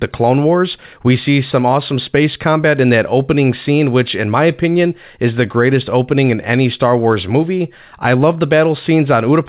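No faults heard; the speech carries the band-limited character of a call path, with nothing above 4 kHz, which fits G.711 mu-law at 64 kbps.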